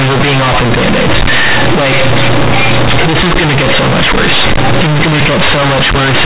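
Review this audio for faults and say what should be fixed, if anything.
Throughout the speech, the sound is very loud, buzzy distortion with strong noise filling the pauses. This is companded audio read as linear: mu-law G.711 bytes, themselves a normal telephone-band signal, are played as plain 8-bit samples without expansion. Each sign change swings the output across about half its range, so quiet passages come out as loud as loud ones and the waveform is bent. To prevent it, decode the mu-law bytes through a proper G.711 expander before playback.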